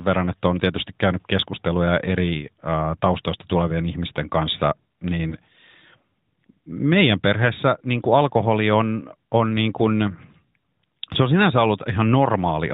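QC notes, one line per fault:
5.30–5.35 s, lost AMR speech frame: just after "taustoista tulevien ihmisten kanssa", one narrowband frame failed its check and the decoder replayed the previous settings, giving a brief dip or warble that fits a single lost 20 ms frame.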